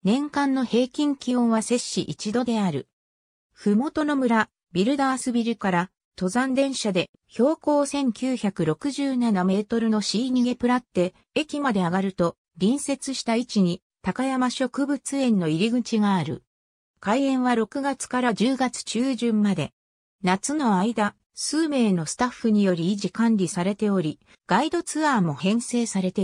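Nothing here calls for comment, as the whole clip runs along without a single technical fault worth pointing out.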